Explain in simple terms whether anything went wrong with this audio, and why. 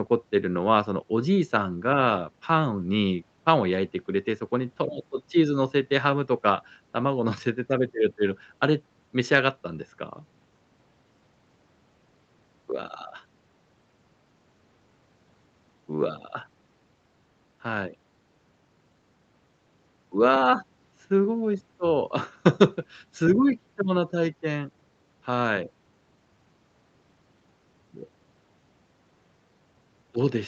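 Nothing went wrong: the speech has gone through an ordinary call chain, where the microphone processing trims the deepest bass and the call codec leaves nothing above 8 kHz, which is normal for a call and not a fault.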